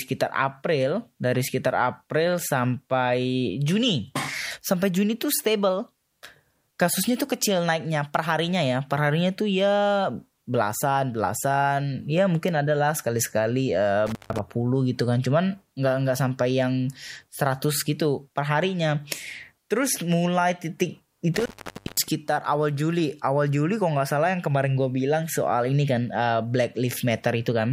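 The speech cuts out with crackly edges at 14.07 s, after "adalah sekali sekali uh", for 150 ms, and at 21.34 s, after "terus mulai titik", for 520 ms. This is intermittent contact, where a loose plug or cable briefly opens.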